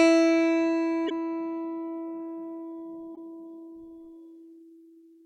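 At 1.06 s the music breaks into a short glitch lasting roughly 56 ms, through to 1.12 s, and the same thing happens again from 3.12 to 3.18 s. That's damaged data in a compressed stream: some bytes in those stretches were lost or garbled, so the decoder couldn't read those frames properly, lost its sync, and had to hunt for the next valid frame header before the music came back cleanly.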